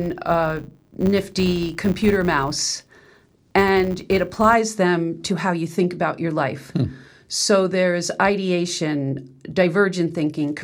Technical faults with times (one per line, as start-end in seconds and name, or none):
0.00-4.54 filter restarted on every block